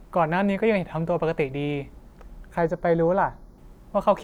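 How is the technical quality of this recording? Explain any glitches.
The recording has one glitch. From 2.58 to 3.58 s there is channel delay (comb filtering). One channel lags by a fraction of a millisecond, so the mono sum cancels from around 3 kHz, and the speech sounds hollow and phasey.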